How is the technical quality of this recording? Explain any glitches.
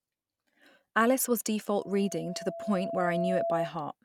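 The recording has a clear fault: loudspeaker feedback squeal from 1.80 to 3.75 s. A microphone is picking up its own loudspeaker, and at 672 Hz the loop gain exceeds one, so a steady tone swells over about one and a half seconds until it is roughly as loud as the speech.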